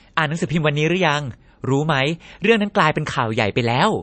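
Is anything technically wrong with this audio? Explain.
Yes. Throughout the speech, nothing is present above 8.3 kHz, and the sound has a plainly audible watery, swirling quality with chirpy s sounds. This is likely MP3 compression at a low bitrate, around 35 kbps: the encoder cut the treble and let weak frequency lines drop in and out between frames.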